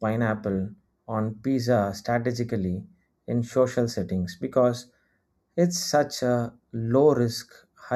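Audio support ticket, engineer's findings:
Channel delay (comb filtering), whole clip. Speech sounds hollow and a bit phasey, with a fixed notch somewhere around 3 kHz and more notches stacked above it. Probably a mono fold-down where one channel runs a hair late, something like a tenth or two of a millisecond, a few samples' worth. Fixed notches point to a constant offset, not drift. Worth checking the summing stage and any per-channel buffering.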